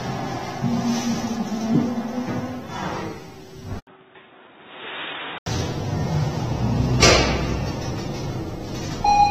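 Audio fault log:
throughout: AAC compression. Everything above 15.4 kHz is gone, and the coding damage is plainly audible: a smeared, watery texture where the coder has starved the upper bands of bits and left gaps or patched them with substitute noise. The ceiling and the amount of smear fit AAC-LC at around 34 kbps, which is likely the cause. At that rate the encoder has to throw away a lot of detail, and you can hear exactly where it did.
3.79 to 5.46 s: input switched to a poorer device. There's a gap of about 80 ms at the switch, and then the sound comes back boxy and dull, with nothing above 3.8 kHz. It's also roughly 10 dB quieter, with a new bed of noise sitting about 30 dB under it. That narrow band, level drop and fresh noise all point to a likely hop onto a lesser mic or a headset call profile. At 5.46 s the full band returns.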